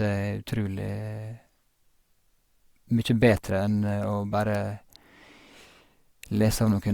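At 4.55 s a sharp snap cuts across the speech. It lasts only a couple of milliseconds. This is an electrical switching spike. A nearby switch, motor or static discharge likely arced, and the audio line picked up that brief burst.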